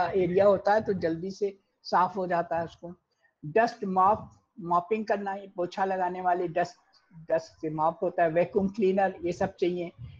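Listening through the whole clip, nothing stood out as a technical problem.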